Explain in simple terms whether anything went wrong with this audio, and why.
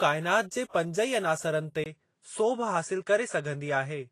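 Yes, two things went wrong. Throughout the clip the sound is grainy and a bit hissy, with nothing above 14.2 kHz. That's likely Vorbis compression squeezed hard enough that the crisp top end gets rounded off and the fine detail turns to fuzz.

Then at 1.84 s, right after "अनासरनि ते", there's a 20 ms gap and the sound turns duller, with nothing above 10.5 kHz, plus a quiet new background noise, though loudness stays about the same. That's likely the input switched to a poorer device partway through, which runs until the end.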